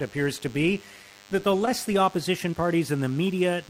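A DECT cordless phone buzz runs through the whole speech clip: a thin, steady buzz at 100 Hz, sitting roughly 30 dB below the speech. A nearby DECT handset or base transmits a short radio burst every 10 ms, and the audio circuitry rectifies those bursts into a pulse train rich in harmonics. Its buzzy, edged timbre sets it apart from mains hum, which is smoother and sits at 50 or 60 Hz rather than 100 Hz.

At about 1.65 to 1.69 s, just after "to be that the" and before "the opposition", a short concealed packet loss occurs. Around 20 ms of audio, which fits a single lost packet, never arrived in time. The receiver extended the preceding sound for about 13 ms and blended back, leaving a brief smear rather than a gap of silence, which distinguishes concealment from a plain dropout.

A second short concealed packet loss follows at about 2.51 to 2.54 s, right after "the opposition". Again roughly 20 ms went missing, with about 18 ms synthesised from the preceding audio. 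The result is a momentary wobble where the speech seems to stall and then rejoin. This is softer than a click or tick, because the concealment fades back in instead of jumping.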